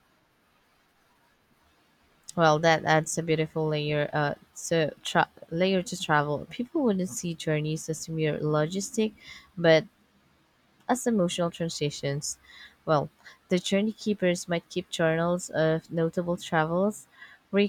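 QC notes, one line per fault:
Nothing to flag here, the speech comes across without any technical problems worth a note.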